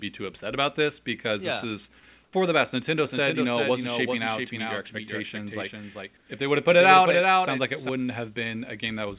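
A speech recording shows comfort noise in place of the background at 2.24–2.33 s and 6.17–6.29 s. The real room tone is swapped for flat, featureless hiss, about 2 dB and then about 7 dB quieter, showing as smooth, textureless patches on a spectrogram. The likely cause is discontinuous transmission filling pauses with synthetic noise. From 3.05 to 7.89 s a doubled audio track appears. A second full-band copy, roughly 5 dB quieter, trails the original by about 0.4 s, starting and stopping abruptly. On a waveform it looks like repeated envelopes offset by a fixed gap, most likely a second, slower capture path mixed in. Throughout, nothing reaches above 4 kHz, consistent with a telephone-band call codec.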